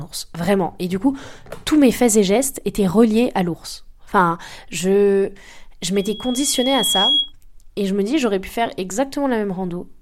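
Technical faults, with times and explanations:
5.95–7.33 s, loudspeaker feedback squeal. After "je je", a single 3.3 kHz tone swells for about a second. It ends a few dB above the speech, just before "et je me dis". The microphone picks up its own loudspeaker, and the loop runs away at that frequency.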